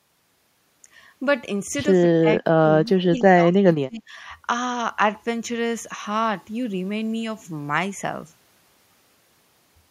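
From 2.21 to 2.42 s and 2.6 to 4.16 s the speech dips sharply, by up to about 30 dB, likely speech suppressed in double talk by an echo canceller.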